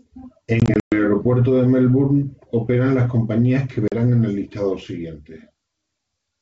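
Packet loss on an ADPCM call appears at 0.60 to 0.94 s, where about 180 ms of speech, lost in roughly ten packets, drops to silence in hard-edged gaps spread over 320 ms, the longest lasting 120 ms. A second, shorter hole of 40 ms follows at 3.88 to 3.95 s. After each gap, the receiving decoder's predictor and step size no longer match the sender's. The speech therefore comes back slightly distorted, then settles over several tens of milliseconds, against the clear wideband G.722 sound.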